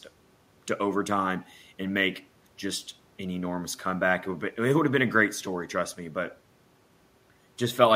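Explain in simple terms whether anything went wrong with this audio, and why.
Nothing went wrong with this speech recording. No moment stands out as a technical problem, so there is nothing here that needs explaining or fixing.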